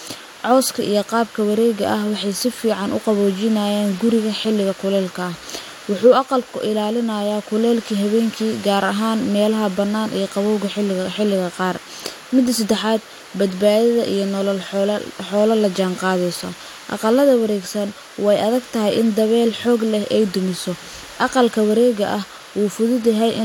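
No technical faults are audible anywhere in the recording.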